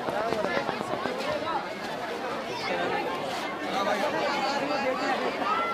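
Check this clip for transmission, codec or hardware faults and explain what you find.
A train of clicks runs from 0.09 s to 1.07 s, at the very start of the clip. Some interference source, likely nearby equipment or a struggling interface, injects a brief pulse at a regular rate of 8.25 per second, about ten in all. The clicks share much the same shape and stand out well above the sound, peaking at around 20 dB over it, so they come across as a steady ticking that continues through any pauses.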